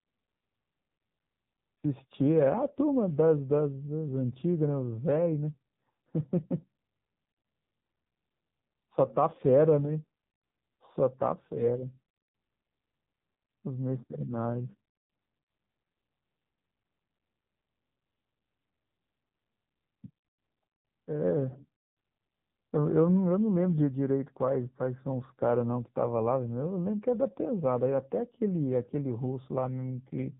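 From start to finish the speech carries the sound of the AMR narrowband mobile codec, with heavy damage. Nothing passes above 3.8 kHz, and the voice turns buzzy and synthetic, which fits one of AMR-NB's lower modes, around 6.7 kbps. The codec rebuilds speech from a vocal-tract model excited by sparse pulses in short subframes, so the roughness lives in the voice itself. A plain telephone band-limit would simply muffle the speech, leaving it otherwise clean.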